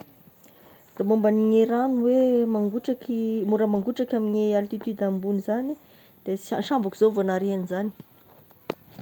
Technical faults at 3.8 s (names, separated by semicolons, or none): lost packet rebuilt from error correction